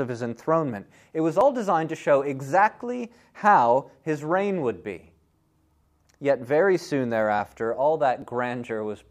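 A likely dropped buffer (overrun) is heard at 1.41, 5.84 and 8.22 s in this speech. At each point the speech jumps forward, and no gap of silence is left behind. Around 10 ms goes missing at 1.41 and 8.22 s, and about 5 ms at 5.84 s. That pattern fits a capture program that fell behind. The hardware overwrote samples it had not yet collected, so the audio on either side of each loss was spliced directly together.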